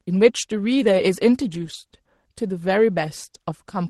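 A lost packet rebuilt from error correction, from 1.57 to 1.75 s: the decoder filled the loss with lower-bitrate copies carried in later packets, so the speech turns briefly rougher and noisier instead of dropping out.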